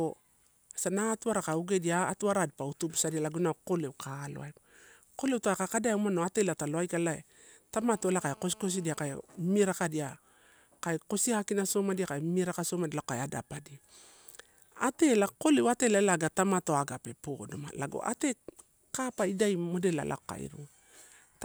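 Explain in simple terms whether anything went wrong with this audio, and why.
From 7.78 to 9.13 s a hard, raspy buzz sits under the speech: GSM phone buzz. A nearby 2G phone on a call sends radio bursts about 217 times a second, which the audio circuit picks up. Unlike smooth mains hum, it sounds harsh and rattly.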